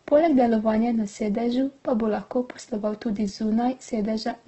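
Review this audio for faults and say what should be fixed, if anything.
Throughout the speech the sound is heavily damaged by Opus compression, likely from its music (CELT) mode at a very low rate, which fits roughly 12 kbps. Nothing reaches above 8.2 kHz, and the band energy is kept but filled with folded or noise content, so the speech turns grainy and rough. Unlike MP3 damage, there are few spectral holes and less swirling. To prevent it, encode at a higher Opus bitrate with full bandwidth.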